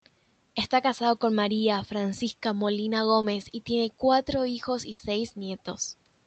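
The clip is speech, and it has a short concealed packet loss at 3.21 to 3.25 s. About 20 ms of the call's audio never reached the decoder in time, so the receiver filled the hole by extending the sound just before it, carrying its pitch forward or substituting shaped noise, then crossfading back into the real signal. What you hear is a momentary smear or wobble lasting a few hundredths of a second. A burst of packet loss follows at 4.91 to 5.01 s, where roughly 80 ms of consecutive audio was lost or arrived too late to play. Concealment again continued the preceding sound but lowered it as the gap went on, so the audio briefly turns into a held buzz or fading hiss. The speech then picks up further along, with the 80 ms in between simply missing.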